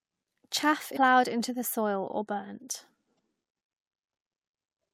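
A speech clip with evenly spaced clicks, about four of them, one every 1.29 s from 0.38 s to 4.02 s. These are clock drift buffer slips, likely from two devices whose clocks differ by roughly 150 ppm, so every so often a handful of samples is dropped or repeated. Separately, brief glitches at 0.93–0.97 s and 3.15–3.18 s come from damaged data in the compressed stream: corrupted frames make the decoder lose sync and skip ahead to the next valid frame.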